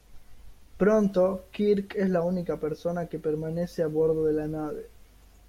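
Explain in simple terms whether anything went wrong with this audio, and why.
Nothing went wrong; no faults can be heard.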